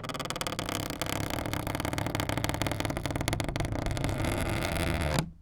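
No technical faults can be heard anywhere in this recording of sounds.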